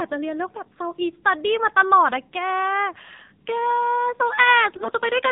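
Throughout, the AMR narrowband mobile codec limits speech to below 4 kHz, and its buzzy, synthetic timbre fits a low mode around 7.4 kbps. From 4.76 to 4.93 s, AMR bit errors corrupt the excitation pulses and finer parameters at a high error rate, turning the speech hoarse, scratchy and gargly while its pitch and level hold.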